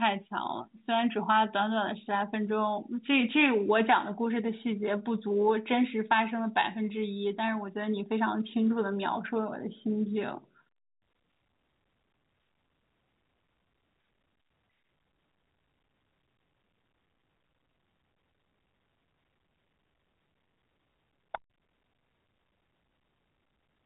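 There are no technical faults to describe in time order; the speech is carried over G.711 A-law telephone coding, which limits the sound to nothing above 3.8 kHz.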